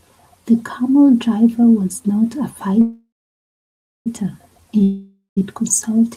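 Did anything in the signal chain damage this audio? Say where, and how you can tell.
Yes, at the network stage, twice. The first is a call audio freeze from 2.81 to 4.08 s. Packets were likely held up in transit until the jitter buffer ran dry. The receiver carries the last sound on as a fading buzz, leaving about 0.96 s of near-silence, for a filled gap of 1.24 s. When speech resumes it picks up exactly where it stopped, so nothing is lost, but everything after runs 1.24 s later than before.

The second is a long network dropout from 4.83 to 5.39 s, most likely packets lost outright rather than delayed. The same fading concealment tail appears, trailing into roughly 0.11 s of silence, and the gap lasts about 0.54 s. This time the speech returns further along than where it broke off. About 0.54 s of audio is simply absent.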